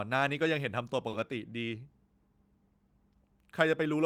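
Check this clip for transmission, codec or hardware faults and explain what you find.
One fault turns up in this speech clip: a short stall from a late packet, from about 1.09 to 1.15 s. A packet missed its playout deadline and the jitter buffer ran dry, so the receiver stretched the last stretch of sound by about 30 ms until the data arrived, then resumed from the same point. Nothing is lost, but the sound is briefly held too long with a slight buzzy or dipping quality, and everything after it plays about 30 ms later.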